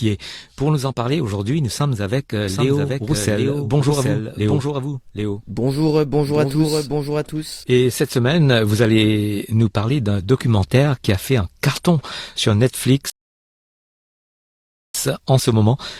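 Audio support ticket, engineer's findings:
Doubled audio track, 2.48 to 7.64 s, starting after "nous sommes avec euh". Likely a second capture path or edit layering the same speech twice, out of step. Full-band copy trails by roughly 0.7 s, about 5 dB under the original, dry, with no room colour. Hard onset and cutoff, heard as an overlapping echo of every phrase.

Rebuffering stall, 13.10 to 14.95 s, after "fait un carton sur". Player buffer ran dry and playback halted until more data arrived. Speech cuts to silence, then resumes exactly where it stopped. No content lost, but 1.85 s of dead air added mid-sentence.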